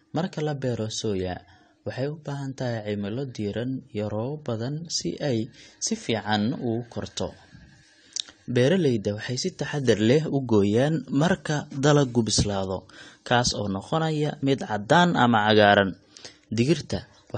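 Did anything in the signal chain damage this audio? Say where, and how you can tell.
Yes. Throughout the speech, the sound is dull and smeared, with a fizzy, warbling texture on sibilants and nothing above 9 kHz. That points to the codec stage, likely AAC compression at a low bitrate of around 32 kbps, which lowered the cut-off and coarsely quantised the spectrum.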